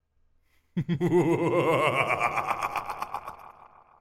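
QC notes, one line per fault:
Nothing stood out on listening to this recording.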